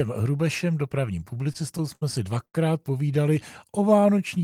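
A speech recording with three network playback faults. From 1.35 to 2.03 s there are repeated stalls (stutter). The jitter buffer ran empty seven times as packets arrived late. The receiver filled 127 ms by continuing the last sound, about 18% of that stretch, with the longest wait 60 ms. Nothing is lost, but the speech drags and stutters. From 2.45 to 2.56 s comes a short stall from a late packet. A sound is held for 84 ms while the receiver waits, then the speech resumes where it left off. From 3.66 to 4.43 s there is a jitter buffer slow-down. The receiver repeated single pitch periods or bits of pauses to rebuild its reserve. This adds 106 ms, so the speech plays at 87% speed at unchanged pitch, with drawn-out sounds.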